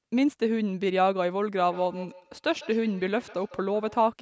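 Speech, and from 1.56 s to 4.15 s it carries a feedback echo between two devices: a second unit in the same room plays the call back, its sound re-enters the first microphone, and neither echo canceller removes audio it did not play itself. Each syllable returns at a steady interval of roughly 150 ms, sitting about 19 dB below the speech and growing thinner and more ringing with each pass. That regular, repeating loop distinguishes it from ordinary room reverberation, which smears into a smooth decay, and from a single late echo, which returns only once. The band-limiting to 8 kHz comes from the call's normal microphone processing.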